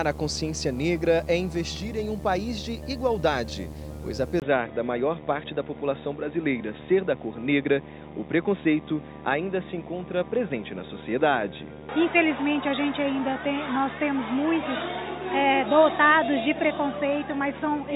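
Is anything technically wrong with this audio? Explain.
Yes, there are two faults.

Video or display buzz runs through the whole clip: a screen or video cable couples into the audio path, leaving a fairly strong buzz at a 75 Hz field rate with hash above it. That rate sets it apart from 50 or 60 Hz mains hum.

From 4.40 s to the end, the sound turns dull, with nothing above 3.8 kHz, after a 20 ms silence. The likely cause is an input switched to a poorer device. The level barely changes, but a new low noise floor arrives with the narrower band, which a simple filter change wouldn't bring.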